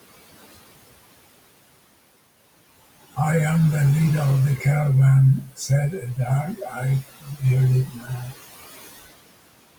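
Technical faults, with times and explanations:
Throughout, noise suppressor artifacts: the room noise, which sits about 18 dB below the speech, drops away in the gaps between phrases and comes back up under the speech. The suppressor estimates the steady noise in each frequency band and lowers those bands frame by frame by up to about 20 dB.
5.45–5.7 s, 5.91–6.84 s, 7.01–7.44 s and 7.86–8.34 s, speech cut by the noise suppressor: in each of these stretches, parts of the speech sound swallowed or faint, with the deepest dips about 14, 12, 21 and 14 dB. The suppressor mistook these quieter, noise-like parts of the speech for background and turned them down along with the noise.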